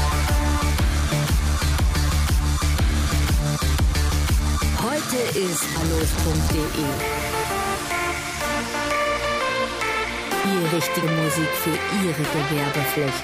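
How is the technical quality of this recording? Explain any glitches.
Two brief glitches, both from compressed frames skipped. At 5.75 s about ten frames of 23.2 ms are lost, so the sound leaps ahead by roughly 0.3 s. At 11.02 s about three frames go missing, a jump of roughly 70 ms. Unlike a dropout, there is no silent gap, just a sudden skip forward.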